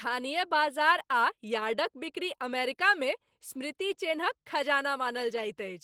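From start to finish the speech carries Opus voice compression, with plainly audible damage consistent with a hybrid setup near 16 kbps. Below 8 kHz a linear-prediction coder rebuilds the voice from a coarsely coded excitation, making it hoarse and faintly robotic, while the band above is filled by a thin transform layer. On a spectrogram the upper region looks smeared and blotchy in blocks that fit 20 ms frames, with harmonics above 8 kHz breaking up.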